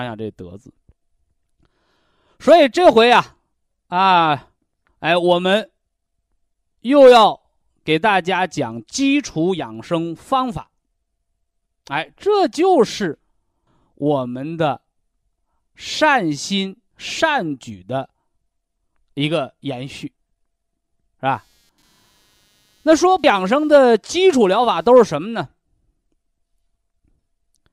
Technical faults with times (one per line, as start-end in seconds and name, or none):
21.33-24.96 computer activity noise